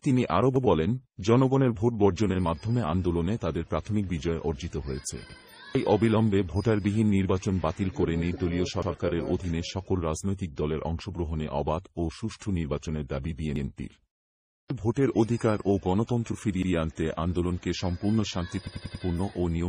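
At 0.56, 5.29, 8.82, 13.56 and 16.63 s, a repeated buffer replays a 93 ms block once with a hard join, which fits a 4096-sample buffer. From 18.67 to 19.04 s it repeats four times. Unlike a dropout, no audio goes missing: the same piece simply stutters again.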